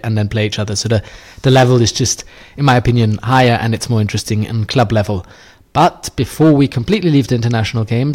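Hard clipping hits the speech five times: 1.46–2.11, 2.66–3.56, 4.77–5.01, 5.78–5.88 and 6.41–7.55 s. The signal overshoots what the stage can pass by about 3 to 8 dB, so peaks get flattened, adding a harsh, crackly fuzz to loud syllables.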